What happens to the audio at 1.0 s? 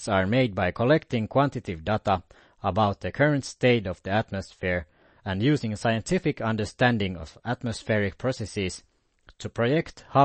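At 1.0 s the speech sounds watery and swirly, with dull treble and nothing above about 8.3 kHz, as it does for the whole clip. The likely cause is MP3 compression at a low bitrate, around 32 kbps: the encoder cuts the highs and switches weak frequency lines on and off between frames.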